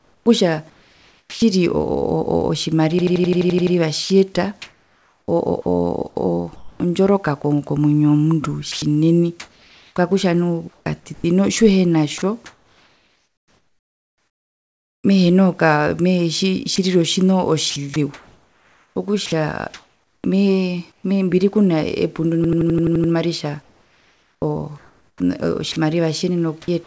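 From the start to 1.42 s the speech sounds chopped by the voice detector, most likely because the sender's voice detector kept switching transmission on and off. About 0.98 s of quiet syllables and word edges are replaced by comfort noise, so the speech breaks up. The G.722 call path keeps everything below 8 kHz throughout.

At 2.99 to 3.76 s a system hang loop appears. The playback stalled while the audio hardware kept replaying its ring buffer, so one 85.33 ms slice repeats exactly nine times. That gives a stutter at about 11.7 Hz, which fits a 4096-sample buffer at 48 kHz. Little or no audio appears to be lost; the stretch is simply frozen in place.

The voice-detector chopping returns at 4.04 to 15.04 s, the longest stretch, where about 4.56 s are filled with comfort noise. It appears again at 16.76 to 21.04 s, with about 1.6 s replaced, and the same choppy gaps and synthetic background return.

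A second hang loop at 22.44 to 23.13 s repeats the same 85.33 ms slice eight times, with the same 11.7 Hz machine-gun stutter.

Finally, from 23.62 s to the end, the voice detector likely chops the speech again, replacing about 1.35 s with comfort noise.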